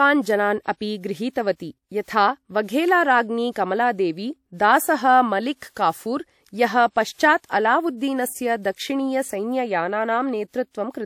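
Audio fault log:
3.52–3.56 s and 8.62–8.65 s, pre-echo: each sharp onset in this speech is preceded by a short hiss, 44 ms long at the first point and 24 ms at the second. The codec's quantisation noise, scaled to the loud attack, is spread across the whole transform block, so it also fills the near-silent stretch just before the attack, leaving that onset softened and smeared rather than crisp.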